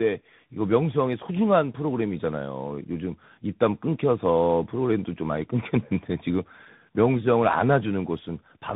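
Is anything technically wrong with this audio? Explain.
Yes. Tandem speech coding runs throughout: the speech passed through two speech codecs in a row, each re-encoding the other's degraded output. This likely fits an AMR-NB to CVSD chain. It sounds rough, muffled and warbly, and a spectrogram shows a hard ceiling near 3.8 kHz.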